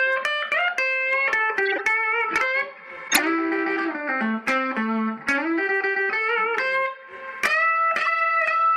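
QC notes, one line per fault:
1.65–1.80 s, 3.08–3.19 s and 8.00–8.03 s: corrupt frame decoded. Short chirping, squeaky bursts of noise that don't belong to the sound. Damaged compressed frames were decoded anyway, their misread gains and codes putting energy at wrong frequencies for a handful, then a few, then a couple of frames.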